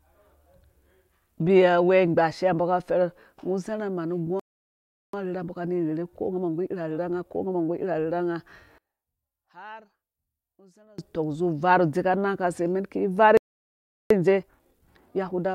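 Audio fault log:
4.40–5.13 s and 13.37–14.10 s, playback stall: the speech halts for about 0.74 s and 0.73 s, likely a player starved of data. The waveform shows a flat gap, the spectrogram a blank column.
5.13–8.07 s and 14.10–15.55 s, time-compressed catch-up: the speech hurries at 1.25 times speed without a pitch change, as small pieces are cut and cross-faded. The spectrogram shows squeezed syllables with unshifted harmonics.
8.78–10.98 s, one channel inverted: the speech collapses by about 27 dB to a faint residue, likely from one channel's reversed polarity cancelling the shared centre in mono. The waveform shrinks abruptly.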